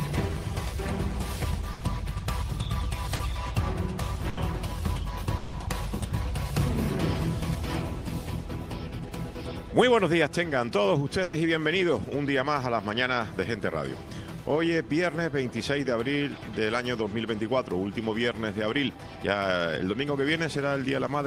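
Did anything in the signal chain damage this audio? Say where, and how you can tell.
Yes, the network stage. Bursts of packet loss sit at 1.73 to 1.83 s, 4.29 to 4.39 s and 11.23 to 11.35 s. The receiver extended the last sound for 80, 80 and 100 ms, letting it fade, then resumed later with those spans gone.

A short concealed packet loss at 3.15 to 3.21 s is also a network fault. About 40 ms arrived too late for the decoder, which synthesised a continuation from the preceding sound and blended back in, leaving a brief smear where the original was missing.

From 5.37 to 5.55 s the sound is stretched into a fading continuation for about 160 ms, never reaching silence, before resuming with that stretch missing. This points to a network dropout, likely a longer interruption in arriving packets that concealment bridged.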